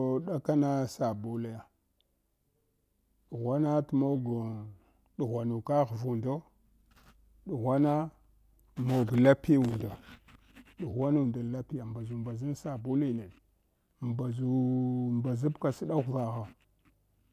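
No technical faults can be heard at any point in the recording.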